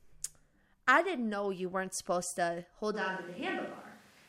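The close microphone likely dropped out, leaving a distant microphone from 2.96 s to the end, right after "weren't supposed to hold": speech turns suddenly roomy and hollow, thinner in bass, at much the same level, with room noise about 25 dB below it.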